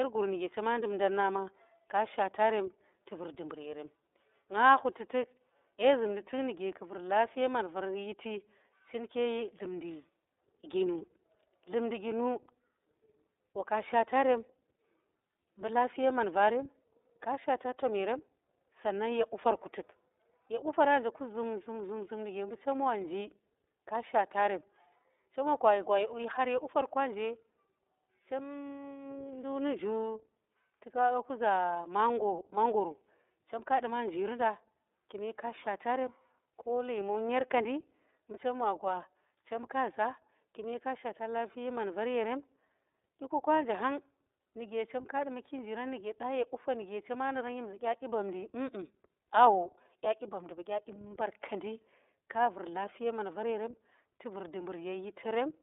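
Throughout the speech, iLBC codec damage is plainly audible. The audio is held to a telephone band of 300 Hz to 3.7 kHz, so it sounds thin and boxy. Each 30 ms frame's excitation is coded independently, which leaves a rough, faintly synthetic buzz that fits the 13.33 kbps mode. A spectrogram shows a hard ceiling near 3.7 kHz and an empty region below 300 Hz.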